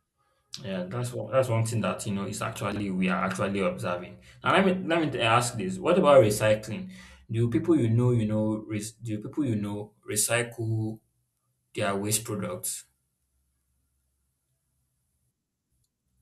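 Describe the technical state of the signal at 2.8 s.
A brief jumbled stutter runs from 2.72 to 2.80 s, between "that you know is" and "we are actually observing": chunks out of order, with one 40 ms chunk arriving a chunk late and three hard joins.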